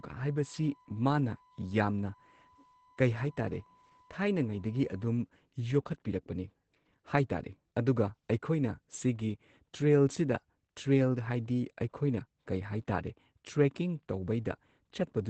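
Muffled, slightly hoarse and faintly robotic speech runs through the whole recording, with nothing above 8 kHz. That is Opus voice compression in its SILK linear-prediction mode. The encoder has held the audio to a wideband 8 kHz limit and coded the excitation coarsely. The damage is plain enough to fit a low bitrate around 12 kbps with 20 ms frames. From the start to 5.05 s, a steady high-pitched whine at 1 kHz also sits well beneath the speech. This is USB whine: current drawn in the bus's 1 ms frames leaking through power or ground into the audio path, giving a fixed tone at exactly that frame rate.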